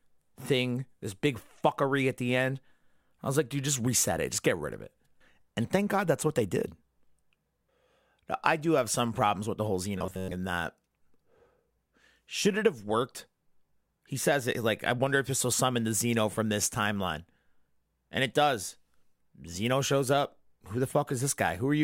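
Right after "problems with the whole", from 9.98 to 10.35 s, the speech goes robotic: a stiff metallic buzz near 93.8 Hz, most of it repeated short buffers, likely about 10.7 ms each looping while fresh audio arrived too late, until "and that".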